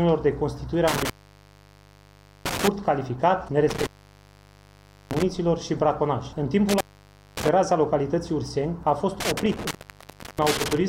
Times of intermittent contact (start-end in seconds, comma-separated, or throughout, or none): 0.88-2.68, 3.69-5.23, 6.69-7.49, 9.20-10.88